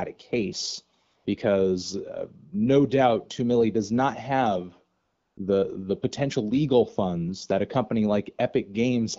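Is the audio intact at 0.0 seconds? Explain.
Yes, the audio is intact at 0.0 seconds: no fault can be heard there.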